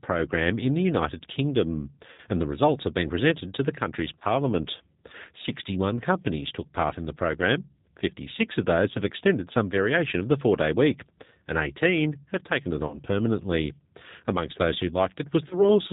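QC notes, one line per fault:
throughout: G.729 codec. Speech sounds band-limited, with nothing above 4 kHz, and a plainly audible rough, slightly synthetic texture. The coder models each 10 ms frame with a vocal tract filter, a pitch predictor and a handful of pulses, so fine detail is discarded and the voice is rebuilt from a crude approximation. The damage level fits G.729A at 8 kbit/s.
2.12–2.22 s, 4.19–4.24 s, 5.96–6.00 s, 12.87–13.02 s, 15.49–15.66 s: VoIP packet loss concealed by the speech codec. At each point the sound is stretched into a buzzy tone or coloured noise that fades as the decoder repeats its last pitch and filter with falling gain. The gaps are about 60, 20, 20, 40 and 20 ms, which fits three, one, one, two and one lost 20 ms packets. Because each frame builds on the last, the speech stays weak or distorted briefly after each gap.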